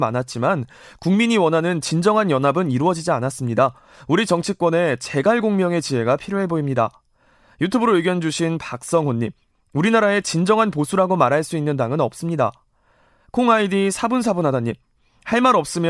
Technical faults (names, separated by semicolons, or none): none